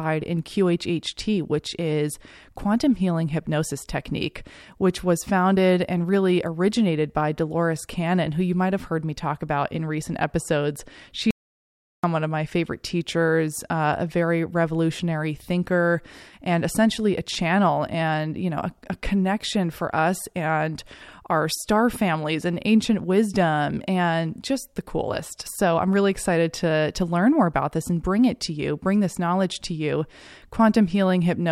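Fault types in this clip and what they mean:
Audio dropout to silence: the input was likely disconnected or muted, so silence was written. From 11.31 to 12.04 s the speech cuts off mid-flow into silence, losing 0.73 s. Unlike a natural pause or noise gate, no room tone remains.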